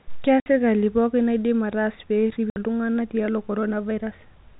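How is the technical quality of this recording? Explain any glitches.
The recording has two dropouts in telephone-band speech, with nothing audible above 4 kHz. Packet loss filled with silence occurs at 0.40–0.46 s and 2.50–2.56 s. Each 60 ms gap, which fits three lost 20 ms packets, was replaced by digital silence. The speech cuts off abruptly at hard edges.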